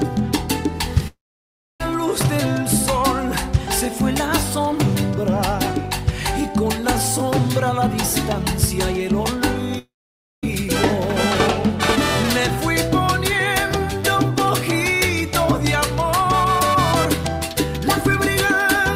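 Two gaps, at 1.07 to 1.81 s and 9.79 to 10.44 s, each a brief fading buzz then near-silence, with audio resuming minus the lost stretch, likely long network dropouts.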